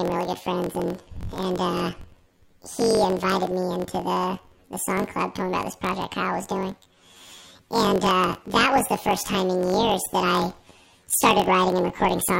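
Throughout the speech, planar audio read as interleaved: each 21.77 ms block plays twice at double speed, an octave up, giving a robotic buzz at 45.9 Hz. A spectrogram shows harmonics doubled in spacing and striped vertically at that rate, and the waveform repeats in short segments.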